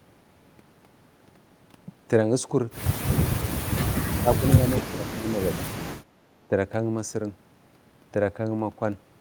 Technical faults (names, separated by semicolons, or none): speech suppressed in double talk